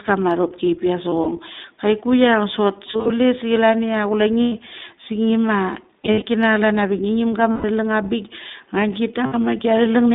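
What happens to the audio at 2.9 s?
Lost iLBC frames from 2.86 to 3.13 s: the decoder covers missing packets by repeating the last pitch cycle mixed with noise, so the sound briefly becomes a held, buzzy vowel. The longest gap lasts about a tenth of a second, and the audio snaps back at once. Under this is the iLBC codec, which runs throughout. It codes each 20 ms frame on its own, which points to its 15.2 kbps mode, and passes only 200 Hz to 3.7 kHz, adding a plainly rough, synthetic edge.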